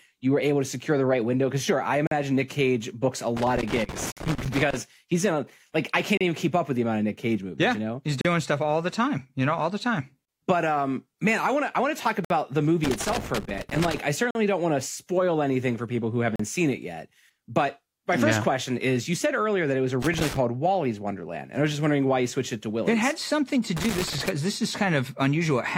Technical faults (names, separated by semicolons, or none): gap between stream segments; loose connector crackle